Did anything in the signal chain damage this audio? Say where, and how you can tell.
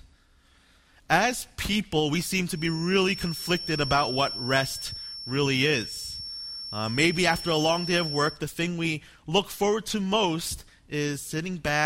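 Yes. A feedback whistle runs from 2.50 s to 8.41 s. It is a thin, steady tone at 5.4 kHz, sitting roughly 10 dB under the main sound and swelling and fading slowly in level. It never grows or runs away. The likely cause is the acoustic loop between a loudspeaker and the microphone, in the analogue path. That loop sits just at the edge of feedback, so one high frequency keeps ringing instead of dying out.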